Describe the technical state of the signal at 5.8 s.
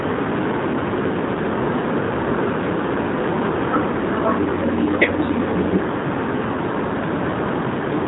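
At 5.8 s the speech carries G.729 codec damage, present across the whole clip. The voice is rebuilt from a vocal-tract filter, pitch predictor and sparse pulses, which fits an 8 kbit/s G.729A coder. Nothing passes above 3.8 kHz, and the result sounds plainly rough and synthetic.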